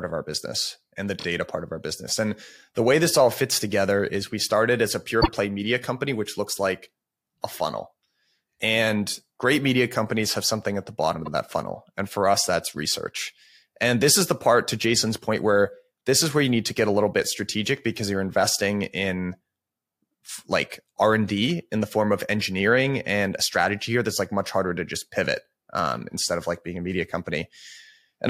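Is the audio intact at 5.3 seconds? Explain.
No. Around 5.21 to 5.28 s the speech stutters, replaying about 52 ms once. This is repeated frames, which fits two compressed frames being sent twice.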